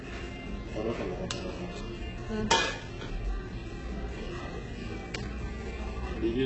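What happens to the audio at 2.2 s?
At 2.2 s you're hearing the same heavy damage that runs through the whole clip, likely HE-AAC compression at a very low rate, around 8 kbps. The treble is patched together from shifted copies of lower bands, so it sounds gritty and metallic, with nothing above 8 kHz.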